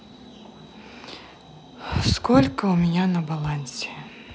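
No technical faults are audible anywhere in the speech.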